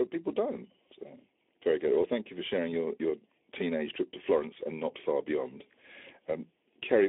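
From the first moment to the end, the speech sounds hollow and phasey, as if heard through a tube, with a fixed dip in the middle of the range that never moves. This is channel delay (comb filtering). One channel arrives a fraction of a millisecond after the other, and when the two are summed to mono, what they share cancels at evenly spaced frequencies. The first notch sits around 1.5 kHz.

Throughout, the speech also has a plainly audible hoarse, grainy roughness, and it is confined to a narrow telephone-like band, roughly 300 Hz to 3.6 kHz, with nothing at all above 3.8 kHz. These are Speex codec artefacts. The low-rate speech coder has too few bits to rebuild the excitation faithfully, so the speech turns noisy and rasping, which fits a bitrate around 11 kbps, and the missing top end leaves it muffled.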